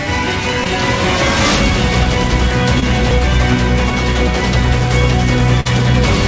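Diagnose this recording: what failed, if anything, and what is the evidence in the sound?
Network packet loss, hidden by the receiver's concealment, causes short concealed packet loss at 0.64–0.68 s and 2.80–2.84 s. Each time about 20 ms of audio never arrived and was replaced by 14 ms and 17 ms of synthesised continuation. At the first event the timing also shifts by a few milliseconds. It sounds like a brief smear. On a spectrogram the preceding harmonics or noise band carry on unchanged across the gap. The waveform shows repeated pitch cycles or noise before real audio blends back in.

A burst of packet loss, also at the network stage, hits at 5.60–5.67 s. Here 40 ms of audio is missing and the receiver filled 47 ms by extending the last sound and turning it down as the gap continued. It becomes either a held buzz or a fading hiss, then the audio resumes further on with that stretch gone. 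A spectrogram shows a frozen, decaying slice followed by an abrupt jump in content. The call codec path shows its expected band limit, with nothing above 8 kHz, which points to wideband G.722 at around 64 kbps.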